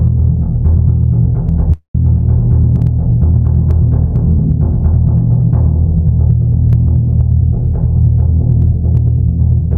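Throughout the music there is gain pumping. The level sounds as if it is likely set far too hot at the input, with a fast limiter clamping it back on every loud hit. The gain swings by around 5 dB, so loud and soft passages sit squashed together. A waveform shows a flattened, dense envelope, and a spectrogram shows the noise floor brightening and darkening in step with the peaks.

From 1.72 to 1.95 s comes a long network dropout, a 220 ms stretch of audio that never arrived, most likely lost in transit. The receiver carries the last sound forward as a decaying buzz or hiss, which fades until the final 110 ms or so is near-silence. The music then resumes with that portion simply gone. On a waveform this is a shrinking tail followed by a flat gap. On a spectrogram it shows as smeared, blurring energy sliding into an empty band.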